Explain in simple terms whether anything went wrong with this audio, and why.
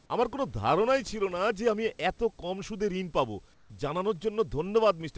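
Right after "কম সুদে ঋণ পাব", from 3.54 to 3.70 s, the room's real background turns into a flat, slightly quieter hiss. This is comfort noise in place of the background. The sender likely stopped sending during the pause, and the receiver filled that gap with synthetic noise.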